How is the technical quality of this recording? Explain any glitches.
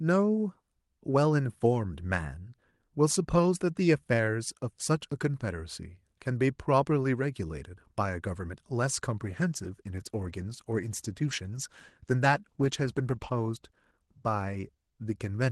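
The recording has one clear fault, a call bitrate drop near the end. Before it, the speech carries the mild coding texture of an Opus call path, which fits about 40 kbps with content reaching roughly 12 kHz.

From 9.2 s to the end, the call's bandwidth estimate fell and the encoder was given far fewer bits, which fits a drop from 40 kbps to 16 kbps held for the final 5.3 s. The coarser coding makes the speech rougher and more watery. On a spectrogram, the harmonics look grainier and smeared.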